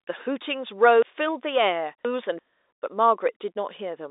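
Between 1.02 and 2.39 s the speech has chunks out of order: one 341 ms block plays three blocks late, producing a jumbled passage.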